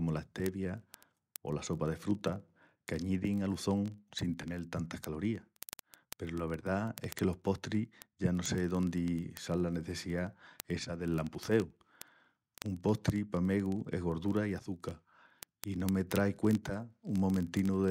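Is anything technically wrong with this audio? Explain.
Yes, there are word clock ticks running from 0.11 s right through to 17.88 s. The receiving device isn't locked to the sender's clock, and with the mismatch around a tenth of a percent, a sample gets dropped or doubled roughly every 20 ms, giving a steady, sharp ticking under the speech.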